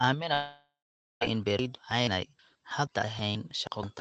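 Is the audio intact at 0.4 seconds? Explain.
No. A long network dropout runs from 0.33 to 1.23 s, so at 0.4 s the sound is a fading buzz carried on from what came before. This is likely the receiver filling in for audio that never arrived. About 0.49 s of silence follows before the audio resumes without the lost part.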